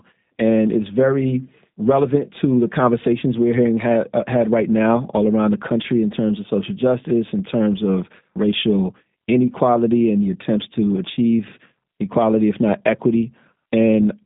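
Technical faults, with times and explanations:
Throughout, G.729 codec: speech sits between 150 Hz and 3.7 kHz and is rebuilt from sparse pulses, giving a rough, synthetic edge that fits 8 kbit/s VoIP.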